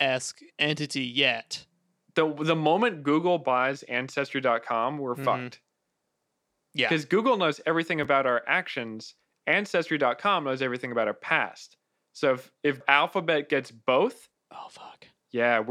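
At 8.03 to 8.06 s, between "knows everything" and "our actions", chunks play out of order: one 11.6 ms chunk lands one chunk late, swapping places with its neighbour. The waveform shows three abrupt discontinuities; the spectrogram shows thin vertical broadband lines, heard as a brief jumbled moment.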